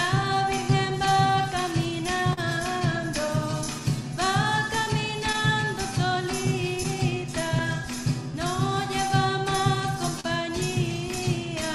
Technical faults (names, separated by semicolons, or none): clock drift between sender and receiver; repeated timing corrections; short stall from a late packet; scattered short gaps